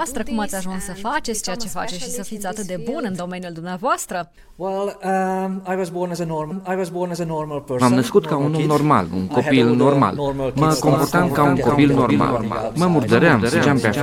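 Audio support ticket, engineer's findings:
Doubled audio track, 10.58 s to end. Second full-band copy of the sound trails the original by roughly 300 ms, about 5 dB quieter. Enters abruptly, no decay or room colour, runs to the end. Likely cause: the same feed captured again via a slower path, or an edit leaving two copies out of step.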